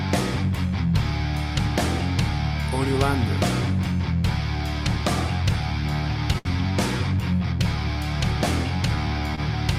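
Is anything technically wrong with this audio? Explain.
Yes, there are two short stalls from a late packet, at 6.38 to 6.47 s and 9.35 to 9.40 s. Each time a packet arrived late, the jitter buffer ran dry, and the receiver stretched the last sound, about 68 ms and 26 ms respectively, before resuming from the same point. Nothing is lost, but the sound hangs with a slight buzz or dip. A spectrogram shows briefly frozen horizontal bands, and the waveform shows the same cycle repeating.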